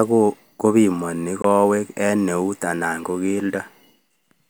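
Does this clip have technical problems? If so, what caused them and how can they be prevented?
Yes. A Bluetooth dropout occurs from 1.42 to 1.44 s: the speech cuts to silence for about 20 ms, then resumes further along, as if it had kept playing. The likely cause is a single audio packet arriving too late at the headphones and being discarded. Keeping the headphones close to the source, with a clear path and less 2.4 GHz interference, helps packets arrive on time.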